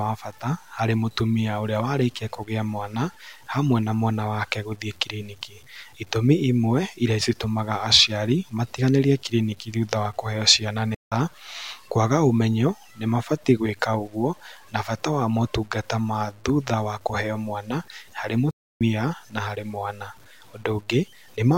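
Across the whole speech clip there is low bit depth without dither: quiet passages sound gritty and grainy, with distortion that tracks the voice and sits only about 35 dB below it. The likely cause is truncation to around 9 bits with no dither to decorrelate the error.

There are two playback stalls, most likely from the player running short of data. The speech stops dead for about 170 ms from 10.95 to 11.12 s, right after "thutha wa kũheo ciana", and for about 0.3 s from 18.51 to 18.81 s, just before "na harĩ mwana".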